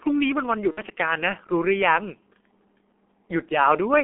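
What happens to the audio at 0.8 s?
At 0.8 s the speech is inside a VoIP packet loss concealed by the speech codec, running from 0.71 to 0.82 s. The gap fits about 60 ms of lost audio, or two 30 ms frames. The decoder extrapolates its last pitch and filter at falling gain, so the sound smears into a fading buzzy tone or coloured noise. Throughout the clip, heavy G.723.1 codec damage at 6.3 kbit/s limits the band to 250–3400 Hz, leaving the speech muffled and hoarse with blurred consonants.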